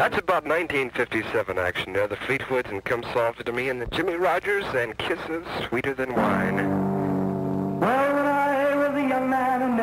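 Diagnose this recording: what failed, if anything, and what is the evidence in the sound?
Nothing failed; no faults heard.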